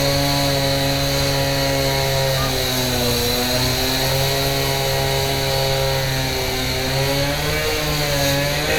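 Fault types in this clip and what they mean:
No fault types are present in this clip.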